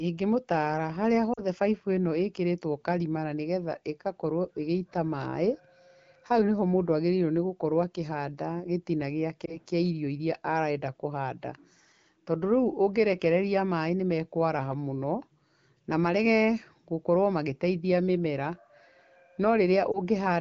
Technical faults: lost AMR speech frames

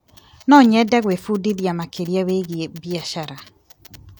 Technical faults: none

